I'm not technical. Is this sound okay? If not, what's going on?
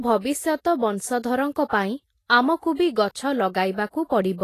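No. The speech was likely squeezed hard by Vorbis compression, which throws away the top above 14.2 kHz and roughly approximates the remaining treble, so it sounds hissy and grainy throughout.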